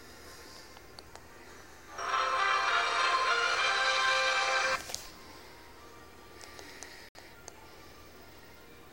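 At 7.09 s the audio drops to silence and returns at 7.16 s. The gap lasts about 64 ms. It is a single hole, not a string of them. This is a digital broadcast dropout. The receiver lost good frames, either from signal loss or failed checksums, and muted its output until valid frames arrived again. The length of the hole fits roughly two lost frames. Whatever was transmitted during that gap is gone and cannot be recovered.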